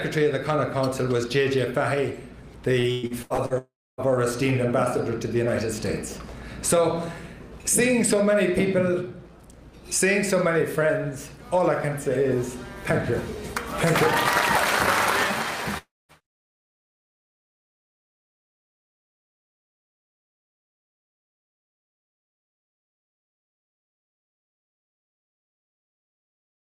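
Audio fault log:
2.79–3.53 s: repeated packet loss (robotic sound). Six separate holes open in quick succession, the longest 112 ms, and each is patched by stretching the sound just before it. Nearly half of this 0.74 s stretch is therefore made-up continuation, which gives the choppy, robotic texture. Unlike a dropout, the real audio keeps returning between the short gaps, so nothing fades to silence.
3.58–4.01 s and 15.78–16.12 s: long network dropout, likely the cause of both events. Each time the audio stops arriving and the last sound is held as a fading buzz. It then goes silent for about 0.28 s at the first event and about 0.22 s at the second, and resumes with roughly 0.4 s and 0.32 s of material missing. What tells it apart from packet loss is one long hole that dies away into silence, not many short patched gaps.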